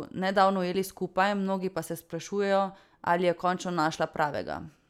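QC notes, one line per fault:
No faults heard in this speech clip.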